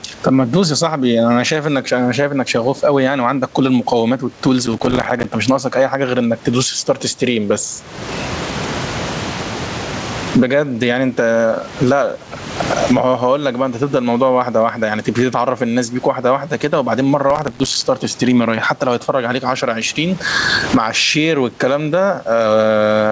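Throughout the speech, the level pumps up and down with a gain swing of about 25 dB. Loud and quiet passages sit unnaturally close together, giving a squashed, breathing quality. This is gain pumping: the input gain is likely set far too high for the microphone, so a fast limiter or compressor keeps clamping down on each loud syllable and releasing in the gaps.

From 4.66 to 5.25 s, and again from 17.30 to 17.82 s, a gritty, tearing crackle rides on top of the speech and then stops cleanly. Each burst is made of dozens of tiny hard-edged dropouts to silence packed closely together. This is processor overload crackle. The processor fell behind and missed its deadline on buffer after buffer, and the spacing fits buffers of a few milliseconds. Every missed buffer became a short hole in the sound until the load eased. The top end, which stops at 8 kHz, is the call codec's normal bandwidth limit.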